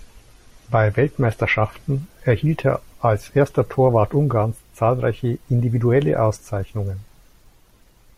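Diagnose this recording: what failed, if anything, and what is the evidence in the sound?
The failure is at the network and playback stage: an adaptive stream starting at a low bitrate. From 0.0 s to 2.0 s the speech is band-limited, with nothing above 12.6 kHz and heavier codec artefacts, which fits an MP3 stream near 40 kbit/s. At 2.0 s, just before "erhielt er als erster", quality steps up abruptly with no gap, consistent with a switch to a 128 kbit/s rendition once the player had measured the connection.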